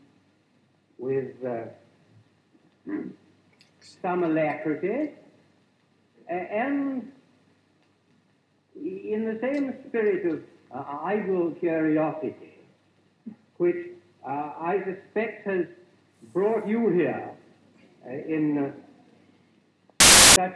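File tags played as audio appear from 20.00 to 20.36 s, near the very end of the sound, as a sudden burst of very loud white noise with hard edges at both ends. The block being read as samples is compressed data from an embedded cover picture. Because compressed bytes are close to random, treating them as audio values produces dense, very loud static rather than any tone or texture, lasting about 0.36 s.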